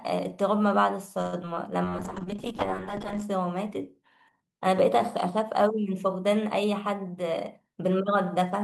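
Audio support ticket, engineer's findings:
Call audio freeze, 1.21–1.35 s. Sound stalls and a fading buzz fills about 112 ms, then resumes where it stopped. Likely delayed packets draining the jitter buffer.

Short concealed packet loss, 1.43–1.45 s and 1.55–1.58 s. Brief smears. About 20 ms each never reached the decoder; the receiver extended the previous sound and blended it back.

Call bitrate drop, 1.86–3.30 s. Rough, muffled audio. Encoder rate cut from 32 to 7 kbps after the bandwidth estimate fell, with high frequencies lost.

Jitter buffer speed-up, 7.06–8.55 s. Hurried delivery at unchanged pitch, about 107% speed. Receiver trimmed pitch periods, roughly a tenth of a second in total, to shrink buffer delay.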